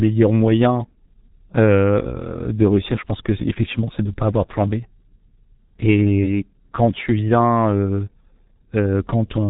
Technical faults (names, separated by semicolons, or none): G.723.1 codec